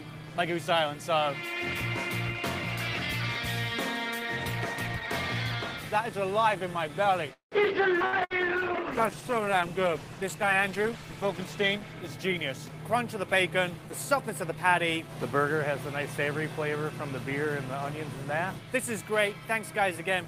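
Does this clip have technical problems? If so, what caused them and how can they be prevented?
Yes, there are several network-related faults, all clustered between about 7 and 15 seconds.

At 7.33 to 7.55 s there is a call audio freeze. The sound hangs as a fading buzz or hiss, drops to about 110 ms of silence, then carries on exactly where it stopped, so nothing is lost but roughly 182 ms of delay has been inserted. The likely cause is packets stalling in transit until the jitter buffer ran dry, with the receiver stretching the last audio to fill the wait. Prevention: give the jitter buffer more headroom and keep competing traffic off the link.

At 8.00 to 8.03 s the audio skips ahead. It lurches forward with almost no gap, and about 70 ms of material is simply gone, the two sides butted together. A stretch of audio was dropped, either in transit or by the buffer when it overflowed, while later audio was already waiting. 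Prevention: let the buffer absorb bursts gradually through time-scaling rather than dropping audio outright.

From 8.00 to 12.13 s there is a call bitrate drop. The sound turns rough, watery and duller for about 4 s. The bandwidth estimate collapsed and the encoder fell from 32 to 14 kbps, so Opus quantised more coarsely and trimmed the upper frequencies until the rate climbed back. Prevention: ensure stable bandwidth and set a sensible minimum bitrate.

Two bursts of packet loss sit at 8.06 to 8.15 s and 8.24 to 8.33 s. Each is heard as a brief held buzz or fading hiss, after which the audio resumes further on. About 60 ms goes missing each time, covered by roughly 60 ms of concealment extrapolated from the preceding sound. Prevention: enable forward error correction and reduce congestion on the path.

From 8.41 to 9.51 s there is a jitter buffer slow-down. The audio drags at about 96% speed with unchanged pitch and sounds drawn out. 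The buffer was rebuilding its reserve after the disruptions by repeating individual pitch periods, adding about 51 ms in total. Prevention: avoid the underruns that force this refill.

From 12.38 to 15.40 s there is a jitter buffer speed-up. The audio feels hurried, running at about 106% speed with the pitch held. With excess audio queued, the receiver shaved out short pitch-period slices, about 200 ms over the span, to trim latency back down. Prevention: smoother packet delivery keeps the buffer from overfilling in the first place.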